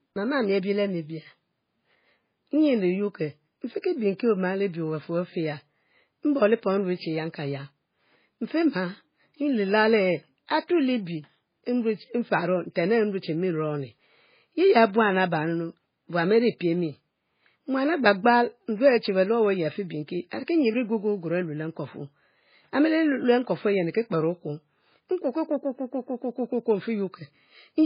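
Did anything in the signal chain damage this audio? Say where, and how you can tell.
Yes. The damage sits at the codec stage. Throughout the clip the speech carries heavy MP3 compression artefacts, likely from encoding at a very low bitrate, which fits something around 16 kbps. Nothing is heard above 5.1 kHz, so s sounds lose their edge, and the remaining band sounds watery and swirly as weak frequency lines drop in and out between frames. A plain low-pass filter would dull the top just as much but leave the rest steady, without that shifting texture.

Pre-echo appears at 3.82 s to 3.84 s, where a short hiss about 22 ms long comes just before a sharp onset and the attack itself sounds smeared. This comes from the same codec. Its quantisation noise spreads across the whole transform block, so noise sized for the loud attack also fills the quiet moment ahead of it. Noise that arrives before the sound sets it apart from reverb or an echo, which can only follow it.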